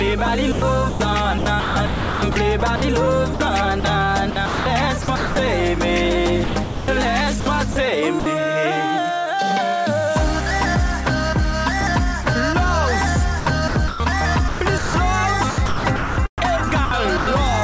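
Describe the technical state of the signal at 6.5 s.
At 6.5 s the audio falls inside a gap from 6.44 to 6.88 s. The sound there is chopped. For roughly a third of a second, about 360 ms, the real signal gives way to a steady hiss, then returns. This is likely sound chopped by the voice detector: the sender stopped transmitting and the receiver filled the silence with generated comfort noise. The G.722 call path keeps its band limit at 8 kHz throughout.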